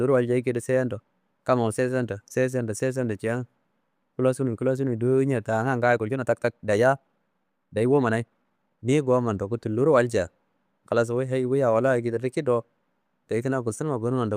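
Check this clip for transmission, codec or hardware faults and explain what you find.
One fault stands out, a time-stretched section. From 5.79 to 8.95 s, just before "gomma ndaku", the speech suddenly runs about 1.35 times faster yet keeps its pitch, sounding rushed. This is likely software squeezing the passage by dropping short slices of audio.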